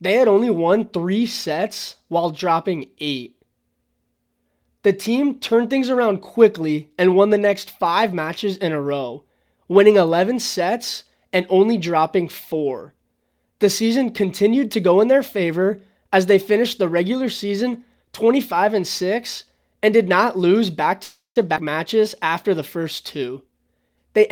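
From 21.03 to 21.38 s, just after "did not lose back", there is a call audio freeze. The sound stops advancing for about a third of a second. The last sound is stretched into a fading buzz, and about 130 ms of that is silence. When playback resumes it picks up where it left off, so nothing is lost, but the stream now runs 323 ms later. The likely cause is packets held up in transit until the jitter buffer ran dry.

At 21.56 to 21.58 s, immediately before "matches after the first", a skip ahead follows. Playback jumps forward with almost no gap, and roughly 150 ms of audio is gone, with the two sides joined nearly directly. The dropped stretch wins back about 150 ms of the 323 ms delay added by the freeze.

From 23.22 to 24.29 s, after "matches after the first", a jitter buffer speed-up is audible. The receiver trims many small pitch-period pieces in succession, about 150 ms in total. The speech runs at about 113% of normal speed while the pitch stays put, giving a hurried delivery as the buffer works its excess queued audio back toward target.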